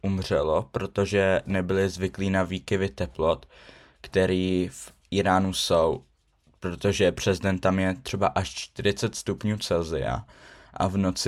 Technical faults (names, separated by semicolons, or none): none